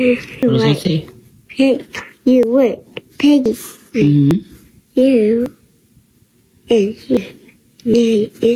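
Gain pumping runs through the whole clip. The swing is roughly 10 dB. Loud and soft parts sit close together, and the sound feels squashed. The likely cause is gain set far too high, with a fast limiter or compressor pulling the level down on every peak.

There are dropped buffers (overruns) at 0.43, 2.43, 3.46, 4.31, 5.46, 7.17 and 7.94 s. Each is a sudden jump forward in the sound. There is no gap of silence. The losses range from a few tens of milliseconds to well over a tenth of a second. The longest are at 0.43 and 7.17 s. The likely cause is that the program fell behind and the hardware overwrote samples before they were collected, so the two sides were spliced directly together.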